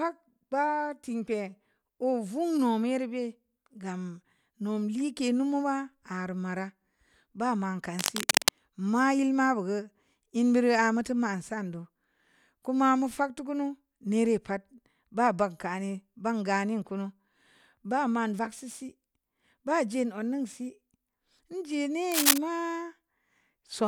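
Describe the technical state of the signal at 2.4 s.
At 2.4 s the speech signal is intact, with no dropout, clipping, distortion or other fault audible at that point.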